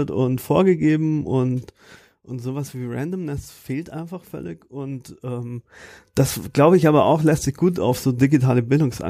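No technical faults can be heard in the speech. Where the level rises or falls, it moves gradually, as a fader would, with no abrupt jumps.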